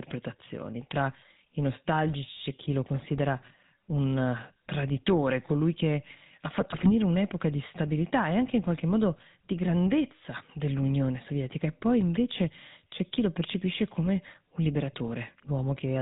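From the start, the whole recording carries the sound of the GSM full-rate codec. The speech has a buzzy, gravelly edge. Nothing comes through above 4 kHz. The coder rebuilds the vocal tract as a filter and excites it with evenly spaced pulses. It keeps only a third of the excitation detail. That sparse drive causes the roughness, which fits the 13 kbit/s full-rate scheme. The damage is plainly audible.

From 6.60 to 6.90 s, GSM bit errors break in. Corrupted bits reached the decoder. Bad filter, pitch and gain values then twisted the spectrum and threw the level around. The speech turns to squawks, pops and gargling for about a third of a second. The density of the disruption points to an error rate of a few percent, spread across a run of consecutive frames.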